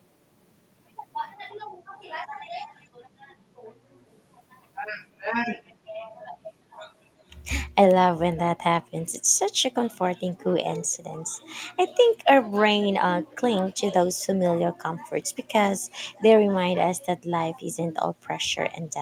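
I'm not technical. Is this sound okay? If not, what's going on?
No. Faint, delayed repeats of the speech surface at 1.99, 2.69, 4.13, 6.73, 10.93, 13.7 (clearest) and 16.15 seconds, lagging about a third of a second. This is echo leak, likely from a speakerphone whose echo canceller let some sound slip back.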